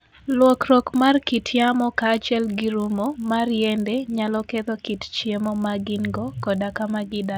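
Right through the speech there's a resampler restarted on every block. Each 20 ms chunk got converted from 16 to 48 kHz in isolation, so every seam carries a small error. The result is a 50 Hz buzz riding along only while sound is present.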